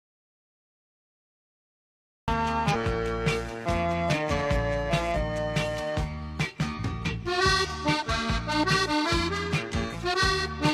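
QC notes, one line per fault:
0.00–2.28 s, audio dropout to silence: the clip opens in dead digital silence, with no room tone or faint hiss at all, and the sound only comes in at 2.28 s, already mid-flow. Whatever was happening before that point is gone. Silence like that, rather than a quiet recording, most likely means the input was lost, through a disconnected device, a dropped link or a stray mute, while the recorder kept writing.
2.70, 5.11, 6.74 and 9.90 s, damaged data in a compressed stream: four short glitches, each about 0.05 to 0.06 s long, spaced irregularly through the rest of the clip. Each one breaks the flow. That's what you get when some of the compressed frames are corrupted: the decoder misreads them, loses sync, and jumps ahead to find the next good frame header.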